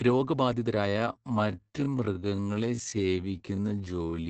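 From the first moment the speech carries Opus voice compression: a wideband SILK coding whose band stops dead near 8 kHz, with a coarse, slightly hoarse and buzzy texture that fits a rate of around 12 kbps. The linear-prediction coder rebuilds each 20 ms frame from a filter plus a crudely quantised excitation, so the damage is a steady roughness and muffling that stays even across the whole clip. A plain low-pass filter would dull the top without that grainy, robotic edge.

At 0.86 s the pace abruptly drops to a little over half speed, about 0.53 times, and stays there to the end, while the pitch does not fall at all. That combination marks a time-stretched section, most likely produced by software that lengthened the audio by repeating short pieces. The repeats make the speech drag. A slowed tape or wrong sample rate would have dragged the pitch down with the tempo.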